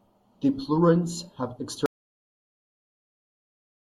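Audio dropout to silence at 1.86 s in this speech recording: the signal cuts off mid-flow and stays silent, with no room tone, to the end, likely from a lost input.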